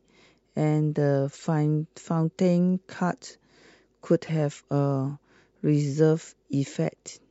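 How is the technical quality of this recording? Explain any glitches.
Two brief glitches mar the speech, both from a corrupt frame decoded. At 1.37 to 1.46 s, a run of several damaged compressed frames was decoded despite flipped bits, so misread gains and codes put energy in the wrong frequency bands, heard as a chirp, squeak, blip or burst of noise peaking around -35 dBFS. At 4.27 to 4.30 s, a couple of frames give a louder glitch near -25 dBFS. A spectrogram shows short, misplaced patches of energy.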